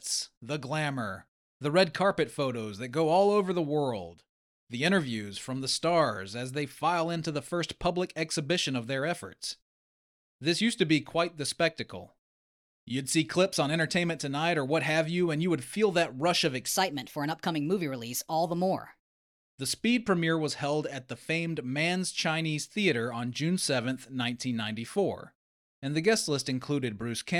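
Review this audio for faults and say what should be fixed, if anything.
From 16.68 s to 19.42 s the speech jumps up in pitch and rushes, then drops back to normal at the end of that stretch. It's a section at the wrong speed. That passage runs about 1.17 times too fast, lifting the pitch by roughly three semitones, because speed and pitch move together when audio is replayed at the wrong rate. The likely cause is that the segment was played or rendered against a mismatched clock. To prevent it, make sure every segment is played or resampled at the same rate it was recorded at before it is joined to the rest.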